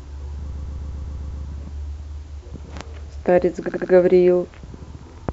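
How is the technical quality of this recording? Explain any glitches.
The recording has two stutters from repeated frames. From 0.51 to 1.43 s, a 131 ms block replays seven extra times. From 3.67 to 3.91 s, a 78 ms block replays three times. Compressed frames were sent more than once, adding about 0.91 s and 0.24 s.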